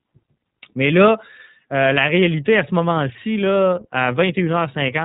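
The speech here has been passed through the iLBC codec. Its narrowband coding leaves nothing above about 3.8 kHz, and because each frame's excitation is coded independently, the voice turns plainly rough and synthetic throughout, a texture that fits 30 ms frames at roughly 13 kbps.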